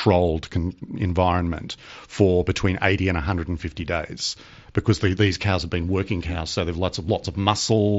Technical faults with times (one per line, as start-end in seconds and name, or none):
none